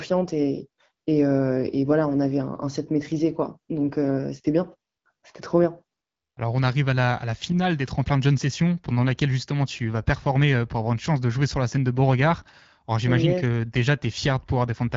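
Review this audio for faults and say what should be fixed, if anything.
Nothing stood out on listening to this speech, so there is nothing here that needs fixing.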